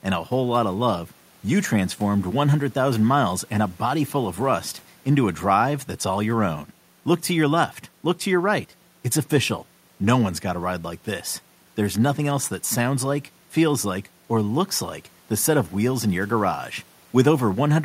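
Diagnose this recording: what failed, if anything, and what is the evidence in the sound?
Nothing stood out on listening to the recording as pointing to a failure at any stage of the chain.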